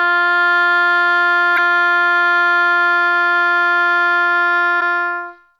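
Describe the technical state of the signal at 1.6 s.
Damaged data in the compressed stream sits just before that point, from 1.53 to 1.59 s, a break of under 60 ms in the music. Corrupted bytes in that stretch leave the decoder unable to parse its frames correctly, so it briefly loses sync and hunts for the next valid frame header. The result is a short chirp or blip cutting across the music, with normal decoding back in place by 1.6 s.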